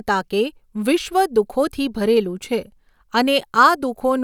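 No technical faults can be heard anywhere in the speech recording. Nothing in the audio stands out as needing a timestamp or a closer look.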